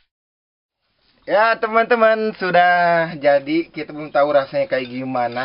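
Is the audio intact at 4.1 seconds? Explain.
Yes, the audio is intact at 4.1 seconds, with no fault audible at that moment.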